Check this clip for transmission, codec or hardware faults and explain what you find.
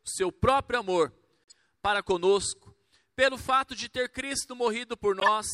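Two faults are present, both corrupt frames decoded. The first, 1.50 to 1.54 s, is a faint glitch near -35 dBFS. The second, 5.20 to 5.28 s, is a loud glitch near -5 dBFS. Flipped bits in a few compressed frames put energy at wrong frequencies.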